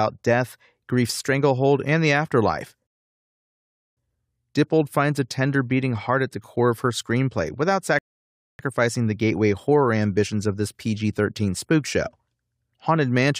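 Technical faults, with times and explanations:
2.87–3.97 s rebuffering stall: after "stranglehold and the afterlife" the speech falls silent for 1.1 s while the player waits for more data, then resumes exactly where it stopped.
7.99–8.59 s rebuffering stall: a 0.6 s silence between "of her screenplay without" and "the gateway horror ambitions" as the buffer runs dry; nothing is skipped, time is only added.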